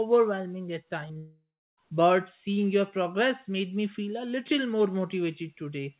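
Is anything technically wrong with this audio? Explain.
Yes. There are two faults, and they run together just after the one-second mark, in audio already limited to nothing above 4 kHz by the narrowband call path, which fits 64 kbps G.711 A-law.

Short concealed packet loss, at 1.08 to 1.11 s and again at 1.13 to 1.17 s: the speech smears and wobbles briefly, twice in quick succession. Each time about 20 ms of audio failed to reach the decoder in time. The receiver patched the gap by extending the preceding sound, for 13 ms in the first case and 20 ms in the second, before easing back into real audio.

Long network dropout, from 1.17 to 1.79 s: the smearing stretches into a fading, buzzy continuation of the last sound, then about 0.33 s of silence before speech resumes further on. This is likely a network dropout in which roughly 0.6 s of audio never arrived. The receiver kept synthesizing from the last sound until the fill faded out, so the lost stretch of speech is simply missing.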